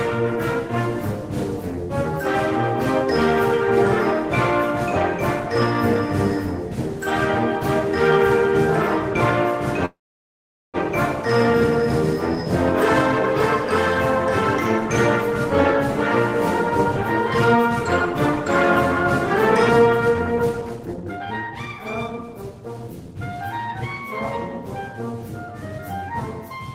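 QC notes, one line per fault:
9.85–10.77 s, call audio freeze: the sound trails off and goes silent for about 0.8 s, then resumes where it stopped with nothing lost. This is likely a jitter buffer that ran dry while packets were held up.
17.49–17.85 s and 19.69–23.14 s, jitter buffer speed-up: playback runs at 122% speed without a pitch change as the receiver trims short pitch-period slices to shed its backlog. That removes a few tens of milliseconds in the first span and roughly 0.7 s in the second, so the sound feels hurried.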